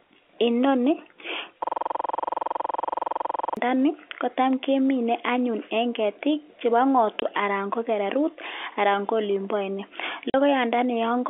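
From 1.64 to 3.57 s there is a system hang loop. The system froze while the audio hardware kept replaying one buffer. A 46 ms slice repeats about 42 times, at 21.5 Hz. That fits a 2048-sample buffer. It sounds like a rough, rattling buzz.

Packet loss filled with silence follows. It happens at 7.20 to 7.22 s and again at 10.30 to 10.34 s. The gaps last 20 and 40 ms. That points to one and then two lost 20 ms packets. Silence replaced them. Each hole has hard edges. The narrow telephone band of the G.711 line stays audible throughout.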